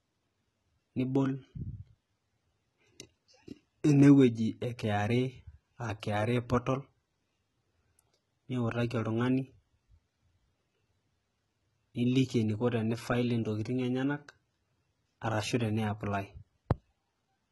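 From start to finish the speech has a gritty, metallic top end, with s sounds coming out lispy and the treble sounding synthetic. Nothing is present above 11.8 kHz. The heavy damage likely comes from HE-AAC compression at a low bitrate, around 16 kbps, where only the lower spectrum is truly coded and the upper bands are copied up from below, so their harmonics no longer match the original.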